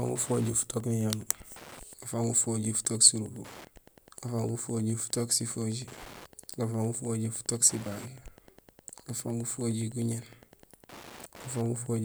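A speech recording with Wi-Fi interference running right through it: a steady tick roughly ten times a second, sitting well under the voice, somewhere around 25 dB down. The spacing works out to a 102.4 ms beacon period, which is the giveaway. A Wi-Fi radio close to the audio circuitry is sending its regular beacons, and the circuit rectifies those RF bursts into audible clicks.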